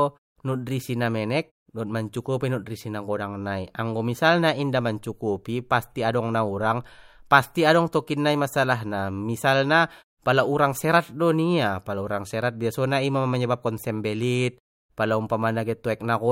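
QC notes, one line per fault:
No faults to note for this speech clip.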